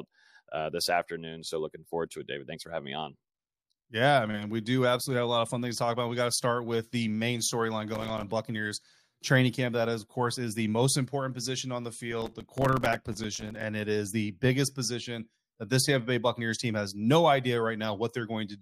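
Processor overload crackle tears through the speech at 7.94–8.23 s, after "with the main storyline", and again at 12.12–13.63 s, after "important position on the" and before "it is the biggest". Missed buffers of a few milliseconds drop to silence, showing as waveform gaps and vertical spectrogram streaks.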